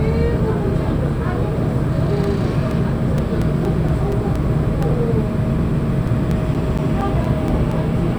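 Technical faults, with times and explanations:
2.24 to 5.06 s: CD scratch ticks. Thirteen short ticks repeat at about five per second, the longest only a few milliseconds. A disc blemish passes the laser once per turn and spoils more data than error correction can rebuild, so the player patches or mutes each gap.
5.84 to 7.72 s: CD scratch ticks. Nine more ticks return at the same rotational rhythm, now reaching about 10 ms. Each marks another pass over the damaged spot, where the concealed samples break the audio's continuity.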